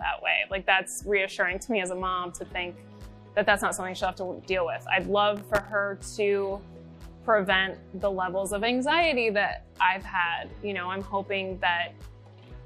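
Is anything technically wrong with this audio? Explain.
Yes. From 5.37 to 5.72 s a gritty burst of crackle tears across the sound. This is processor overload crackle: the processor missed around twenty very short buffer deadlines over that stretch, each under a millisecond, and each miss replayed old audio with hard edges.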